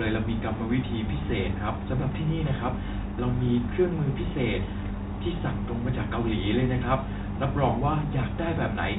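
Nothing's wrong here: it's just a bit of speech carried over ordinary G.711 A-law telephone coding, which caps everything at 4 kHz the way a landline would.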